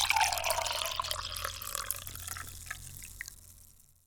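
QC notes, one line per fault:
2.10–2.54 s, processor overload crackle: the processor falls behind and misses a long string of buffer deadlines back to back. The sound points to very short buffers, on the order of a millisecond and a half, with a few dozen missed in this stretch. Each missed buffer comes out as a brief hole of silence with abrupt edges. Strung together over this span, those hard-edged dropouts form a gritty crackle laid over the sound. It stops once the load eases.
2.99 s, damaged data in a compressed stream: a small patch of the encoded data is corrupt, so the decoder cannot read the affected frame correctly and loses its place in the stream until it finds the next valid frame header. The result is a single, very short blip, a few milliseconds long, with a sharp, unnatural character that does not belong to the surrounding sound.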